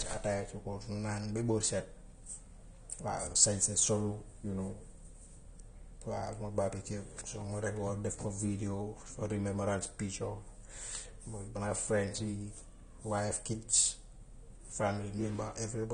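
Speech runs throughout with nothing above 9.7 kHz, a dull, smeared top, and a plainly audible warbling, fizzy texture on sibilants and held sounds, likely AAC compression at a low bitrate around 32 kbps. A simple low-pass filter would dull the sound without that fizz and warble.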